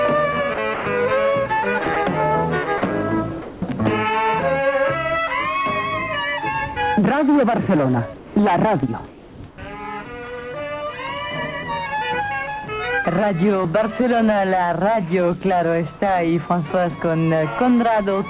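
The sender's voice detector likely switched on and off repeatedly between 0.54 and 0.86 s, and again between 1.84 and 1.96 s, so this is sound chopped by the voice detector. About 160 ms of the first stretch and 40 ms of the second were swapped for comfort noise. The sound breaks up into short pieces there.

Five times the detector likely judged quiet sound to be background and stopped sending: at 2.78 to 2.82 s, 3.42 to 3.62 s, 8.16 to 8.36 s, 9.48 to 9.58 s and 15.98 to 16.02 s. This is sound dropped by the voice detector. The lost portions range from about 20 ms to 110 ms. Each time, the sound gives way to steady noise or near silence, which is very brief at 2.78 and 15.98 s and longer at 3.42 and 8.16 s, before the sound returns.

From 9.08 to 9.58 s, discontinuous transmission likely stopped the stream, and the receiver filled about 420 ms with generated noise. This is comfort noise in place of the background. 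The detailed real background gives way to a flat, featureless hiss shaped only loosely like it. The drop at 9.48 s falls inside this stretch.

All of this passes through the telephone-band call path, where nothing above 4 kHz is heard.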